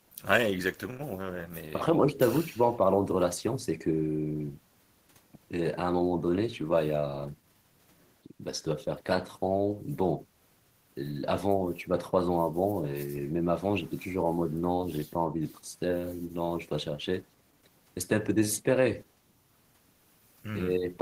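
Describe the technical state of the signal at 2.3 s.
At 2.3 s the speech signal is intact, with no audible fault at that moment.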